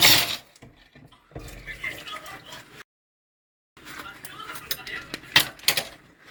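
From the start, the sound has a swirly, smeared, hollow quality. Transients lose their edge and blur. This is generation loss, likely from the audio being decoded and re-encoded with a lossy codec about four times. Each pass quantised on a shifted frame grid, so noise piled up. The character fits an Opus chain at around 64 kbit/s. The band still reaches 20.2 kHz, so the damage is smearing, not dullness.

At 2.82 s the sound cuts to silence. It returns at 3.77 s, a gap of about 0.95 s. This is a playback stall. The player likely ran short of data, or its thread was blocked, and output went quiet until it recovered. The break lands in mid-flow. Then the sound resumes.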